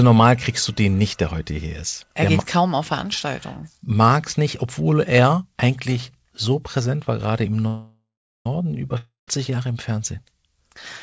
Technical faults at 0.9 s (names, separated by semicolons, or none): none